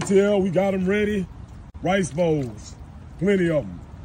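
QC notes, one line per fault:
1.70 to 1.74 s, gap at a join of encoded pieces: a silence of about 43 ms cuts into continuous sound, its edges softened by the codec, and the sound then resumes exactly where it stopped. The pieces were evidently encoded separately and joined without trimming the encoder's start-up delay or final-frame padding, which fits pieces roughly 2 s long. Unlike a dropout, nothing is lost; the audio is only delayed.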